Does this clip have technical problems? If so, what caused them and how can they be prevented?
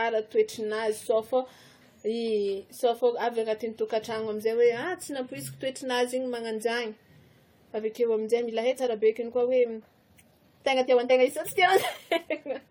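Yes. Generation loss runs through the whole clip. The speech sounds swirly, hollow and smeared, and consonant attacks are soft. That's likely from repeated AAC-LC re-encoding, about seven passes at something like 64 kbit/s. Each pass piles on fresh artefacts. Keep a lossless master and encode only once at the end.

From 8.37 s to the end there's a time-stretched section. The speech suddenly runs about 1.39 times faster at the same pitch, so it sounds rushed, likely because short slices were dropped to squeeze it into a length. Trim the content itself rather than stretching it.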